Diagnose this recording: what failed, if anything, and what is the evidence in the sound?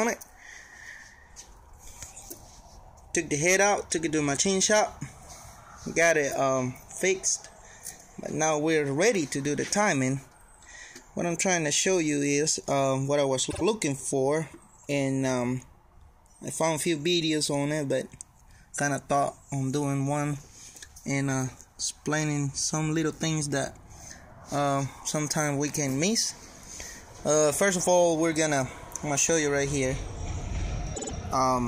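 A short stutter at 13.49–13.62 s and again at 30.94–31.12 s: repeated frames in the codec or storage stage. A 52 ms block, which fits two compressed frames, replays twice, then three times, adding about 0.10 s and 0.16 s to the audio.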